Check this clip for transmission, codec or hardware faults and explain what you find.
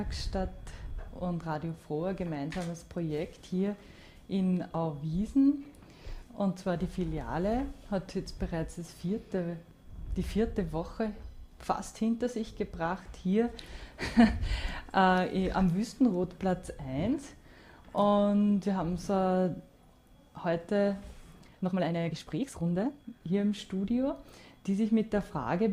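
One fault stands out: a time-stretched section from 21.33 to 23.21 s. Across those 1.9 seconds the audio suddenly runs about 1.83 times faster, then snaps back to normal pace, while its pitch stays exactly where it was. The hurried stretch sounds rushed. The likely cause is software shortening the segment to fit a length by dropping short slices and joining the remainder, which keeps pitch intact. That unchanged pitch separates it from a simple playback-speed error, where faster audio would also rise in pitch.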